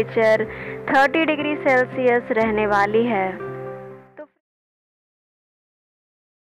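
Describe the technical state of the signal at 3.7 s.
At 3.7 s the signal is intact, with the level simply easing down as part of a smooth fade-out that begins around 3.5 s and finishes at 4.41 s, with no click or hard edge.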